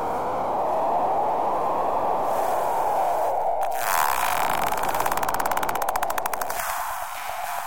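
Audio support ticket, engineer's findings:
No faults found.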